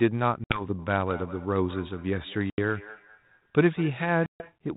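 At 0.44 s the speech drops into a hard-edged hole, packet loss on an ADPCM call. About 60 ms of audio, a few packets' worth, is replaced by silence. Because the decoder's adaptive predictor and step size lose track of the sender's during the gap, the speech resumes at 0.62 s slightly distorted before it settles. On a waveform this is a flat silent run. On a spectrogram it is a blank vertical band.

From 0.79 s to 4.59 s there is feedback echo between two devices. Another device in the same room is replaying the call, and this microphone picks it up again, so each phrase returns roughly every fifth of a second. The repeats sound thinner and more ringing each time, with the loudest about 17 dB below the direct speech. A spectrogram shows faint copies of each syllable's pattern trailing it at regular spacing. A waveform shows small ghost bursts between the main ones.

The same ADPCM packet loss recurs at 2.50 s, where about 80 ms drops out, and at 4.26 s, where about 140 ms drops out. 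Each gap has the same abrupt silent edges. Each recovery has the same short unsettled, distorted onset before it settles. The band stops at 4 kHz throughout, and the light coding damage fits 32 kbit/s G.726 coding.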